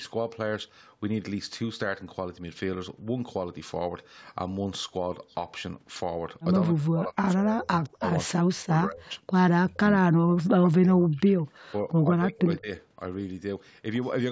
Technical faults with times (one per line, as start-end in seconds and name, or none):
6.74-9.34 speech suppressed in double talk
9.63-9.84 speech suppressed in double talk
10.13-11.64 speech suppressed in double talk
11.89-12.71 speech suppressed in double talk